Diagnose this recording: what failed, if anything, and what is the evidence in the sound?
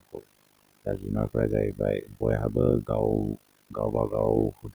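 Noise suppressor artifacts, from call processing. The room noise sinks by about 20 dB between words and swells under them.

Overlap-add ripple, also from call processing. A level ripple at around 50 Hz dips by about 60 dB. The frame overlaps do not sum to a constant gain.

Speech cut by the noise suppressor. At 0 to 0.24 s, before "द जुनर् फ्र", and at 2.05 to 2.22, 3.7 to 4.12 and 4.52 to 4.74 s, speech drops by up to about 20 dB. The suppressor took it for noise.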